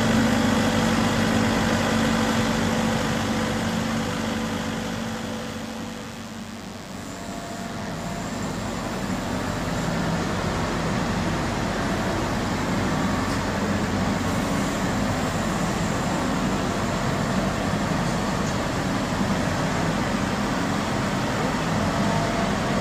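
DECT cordless phone buzz runs from start to finish: a thin, steady 100 Hz buzz rich in harmonics, sitting roughly 20 dB below the wanted sound. A nearby DECT handset or base transmits a radio burst every 10 ms, and the audio circuitry rectifies those bursts into audible buzz.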